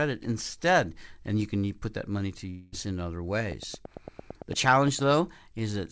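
At 2.50 s the speech drops out for about a quarter of a second, through 2.74 s. That's a long network dropout, likely packets that never arrived. The receiver papers over the roughly 0.22 s gap by stretching the last sound into a fading buzz, and the speech then picks up past the missing stretch.

From 3.52 s to 5.12 s there's a train of clicks, about fifteen sharp ticks at a steady 8.8 per second, likely interference or a struggling interface. They poke a little above the speech and carry on through the pauses too, all sitting within the call path's band that stops at 8 kHz.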